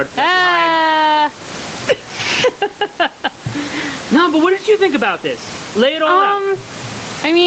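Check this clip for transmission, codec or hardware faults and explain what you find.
One fault is audible, running through the whole speech clip. Gain pumping occurs throughout: the level swings by about 15 dB, likely because a fast limiter clamps over-high microphone gain, so loud and soft parts end up closer in level and the sound is squashed. Beneath this, the call path's 8 kHz top end and faint room noise are audible.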